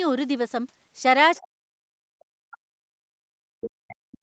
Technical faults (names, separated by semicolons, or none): speech suppressed in double talk; other side's voice leaking through